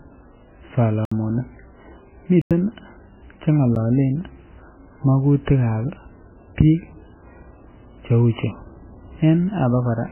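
Throughout, the speech sounds watery and swirly, with nothing above 3 kHz, likely from heavy MP3 compression at a very low bitrate around 9 kbps; spectrograms show a flat ceiling and flickering patches. Blocks of digital silence cut in at 1.05 s (63 ms), 2.42 s (93 ms, fitting a 4096-sample buffer) and 3.75 s (10 ms), heard as short holes, the last as a tick or dip, and seen as flat gaps.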